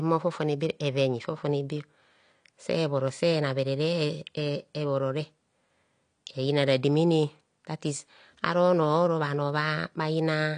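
Speech, likely passed through low-bitrate AAC compression throughout, which fits about 32 kbps: nothing above 9.8 kHz survives, leaving the sound dull, smeared and fizzy.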